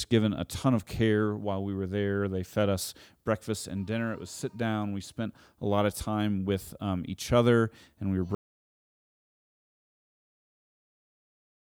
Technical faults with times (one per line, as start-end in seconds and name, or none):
8.35-11.76 audio dropout to silence